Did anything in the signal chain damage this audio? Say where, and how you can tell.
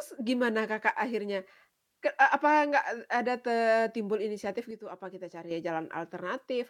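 Yes. A sudden gain jump starts at 4.71 s, right after "ada te timbul inisiatif", and lasts until 5.51 s. The level falls by about 7 dB in a single step, then returns just as abruptly. The background noise drops and recovers with the sound, so the change is not in the source. That points to a digital gain stage, likely in the driver or call processing. A new gain value was applied from one sample to the next, with no ramp.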